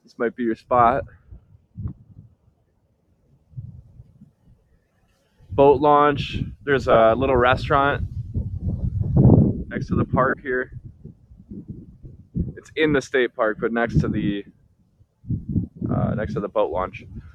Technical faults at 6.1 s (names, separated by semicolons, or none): noise suppressor applied to music or sounds